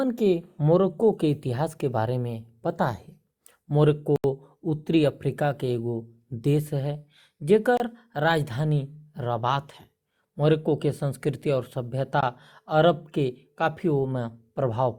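Abrupt dropouts, an 80 ms hole at 4.16 to 4.24 s, 27 ms at 7.77 s and 20 ms at 12.21 s, are blocks of digital silence, where samples were replaced by zeros without any fade.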